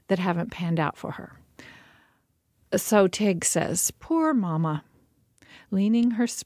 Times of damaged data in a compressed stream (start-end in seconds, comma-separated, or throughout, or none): none